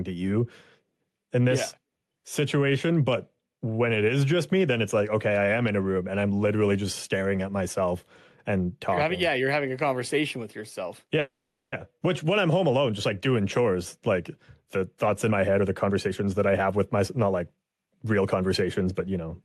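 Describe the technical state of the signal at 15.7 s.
Jitter buffer speed-up runs from 15.06 to 19.17 s, so 15.7 s falls inside it. To shrink an overfilled buffer, the receiver repeatedly cut out short pitch-period slices of the speech, roughly half a second in total, so the speech plays at about 113% speed with unchanged pitch and sounds hurried.

Gain pumping is also present here, as through the whole clip. The gain swings by about 10 dB, likely from gain set far too high with a fast limiter clamping it down.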